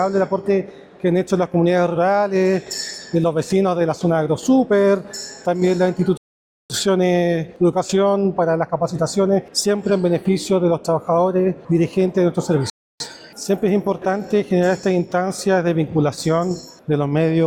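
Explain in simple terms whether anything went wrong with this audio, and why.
The player ran out of downloaded audio twice and had to wait for more, a rebuffering stall. The sound drops to silence from 6.17 to 6.70 s and again from 12.70 to 13.00 s, then picks up exactly where it stopped, with nothing missing, only about half a second and a third of a second of added waiting.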